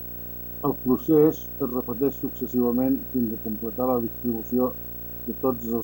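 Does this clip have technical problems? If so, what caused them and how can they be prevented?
Yes. Video or display buzz runs throughout. A screen or video cable couples into the audio, adding a 59.94 Hz field-rate buzz only about 10 dB below the speech and a 15.7 kHz line-rate whine. On a spectrogram these appear as stacked harmonics and a steady high line. Routing audio cables away from displays and video leads prevents it.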